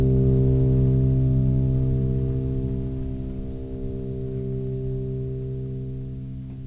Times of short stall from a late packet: none

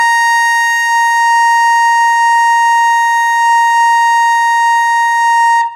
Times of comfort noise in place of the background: none

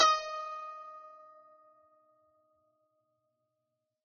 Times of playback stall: none

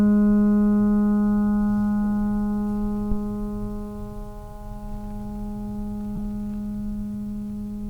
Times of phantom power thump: 3.12-3.21

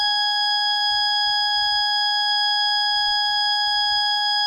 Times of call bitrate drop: none

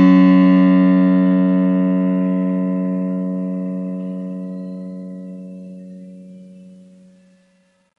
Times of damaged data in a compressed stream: none

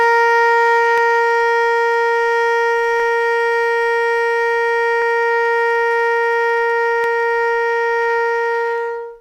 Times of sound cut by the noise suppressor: none

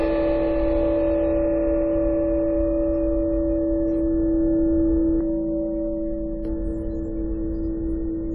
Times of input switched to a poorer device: none

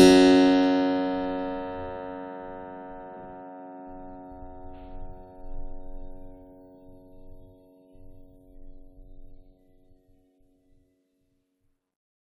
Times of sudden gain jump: none

